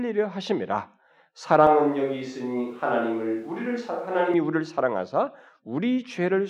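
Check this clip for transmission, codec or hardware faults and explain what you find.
One fault stands out. From 1.67 to 4.34 s the sound turns suddenly roomy and hollow, with thinner bass and room noise about 35 dB below the speech, at an unchanged level, then snaps back. This is likely a switch to a distant microphone, replacing the close one for that stretch.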